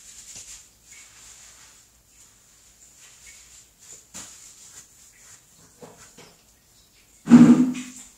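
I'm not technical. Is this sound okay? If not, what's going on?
No. At 0.33 to 0.40 s and again at 6.21 to 6.34 s there is a corrupt frame decoded: damaged chunks of the compressed file were played anyway, scattering sound into the wrong pitches as a brief squeaky blip. The second, longer glitch spans several chunks.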